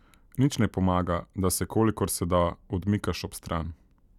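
Listening to the speech recording, nothing stood out as a technical problem at any point.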